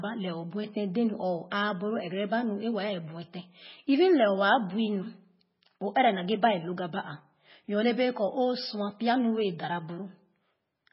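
Throughout, the speech has a heavy watery swirl and nothing above 5.6 kHz. The likely cause is MP3 compression starved of bits, which fits roughly 16 kbps.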